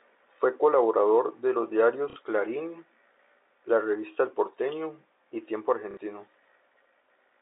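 At 2.1 s, just after "colaborador de los", and again at 5.91 s, packet loss with last packet repeated fills a 60 ms gap by replaying audio, which fits two 30 ms packets, giving a robotic stutter over the band-limited G.711 telephone sound, not the silence of a plain dropout.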